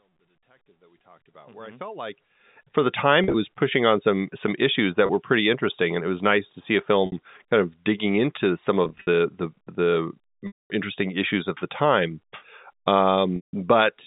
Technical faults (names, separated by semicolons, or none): packet loss with pitch repetition